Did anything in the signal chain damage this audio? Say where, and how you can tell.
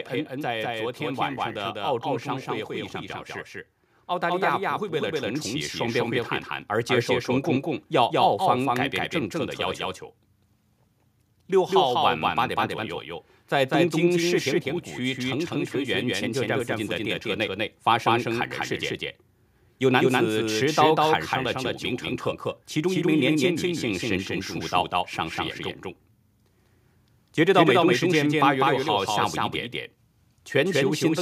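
Yes. A doubled audio track runs through the whole clip. Every sound comes back a second time, roughly a fifth of a second later and at about the same level, with no reverb tail or room colour on the repeat. A clean full-band copy like that isn't an acoustic echo. It most likely comes from the driver or routing stage picking the signal up twice, once through a slower path, or from an edit that stacked two copies out of alignment.

There's also automatic gain rising between 4.07 and 7.93 s. Over those four seconds or so, the level swells by about 5 dB, and the background comes up right along with the speech. That's the giveaway that it's gain and not someone talking louder. This happens at the call-processing stage: the AGC decided the input was too quiet and slowly turned itself up.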